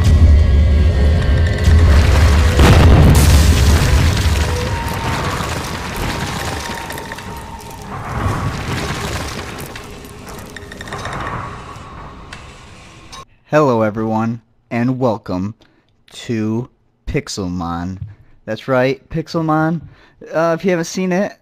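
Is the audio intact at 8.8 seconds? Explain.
No. Sample clock jitter runs through the whole clip, including 8.8 s. The converter's clock wavers by roughly a microsecond or two, so samples land early or late. The resulting error, roughly 40 dB below the signal, is a hiss that rises on steep, loud or bright passages.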